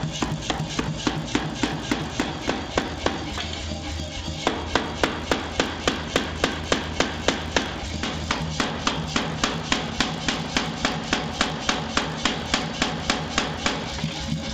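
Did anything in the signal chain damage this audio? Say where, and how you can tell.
Yes. Resampler restarted on every block, throughout, in the 16 kHz to 48 kHz conversion. Each 20 ms block lacks its neighbours, so edge errors buzz at 50 Hz under signal.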